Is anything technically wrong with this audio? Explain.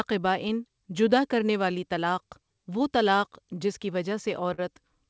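Yes. There is clock drift between sender and receiver throughout: the sender's clock runs about 2% slow, so the receiver's jitter buffer keeps draining, unlike a fixed speed error, which would shift pitch.

From 0.12 to 4.43 s, repeated timing corrections stretch the speech to 98% speed, repeating small pieces that add about a tenth of a second in small, unevenly spaced edits rather than one glitch.

From 4.54 to 4.60 s, a short stall from a late packet holds the last sound for 40 ms. Nothing is lost, unlike a dropout, just a brief hold. The G.722 call path leaves nothing above 8 kHz.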